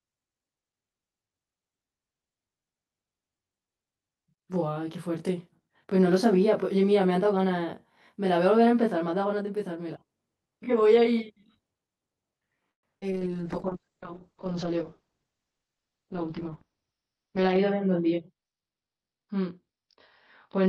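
Throughout the speech, one channel runs about 20 ms behind the other, and summing the two to mono produces channel delay comb filtering. Shared content cancels at a dense series of evenly spaced frequencies starting very low, around 20 Hz, so the whole recording sounds rough or slightly doubled.

From 12.71 to 12.85 s there is a call audio freeze, most likely caused by delayed packets draining the jitter buffer. The receiver fills 117 ms, about 110 ms of it near silence, before the speech resumes where it stopped, with nothing lost.

At 12.99 to 13.04 s a skip ahead follows: roughly 100 ms of audio is discarded while later packets are already waiting, and playback jumps forward with only a 26 ms patch bridging the join.

From 13.06 to 13.92 s the jitter buffer slow-down repeats short pitch-period segments, adding 93 ms, so the speech runs at 90% speed without any change in pitch and sounds drawn out.

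From 13.11 s to the end, a call bitrate drop cuts the encoder from 64 to 8 kbps, holding the lowest rate for 4.5 s. The bandwidth narrows from 20 kHz to 6 kHz, which leaves the speech muffled and coarse.

From 15.17 to 16.05 s the jitter buffer speed-up removes about 100 ms in small pitch-period pieces. The speech runs at 112% speed at the same pitch and sounds hurried.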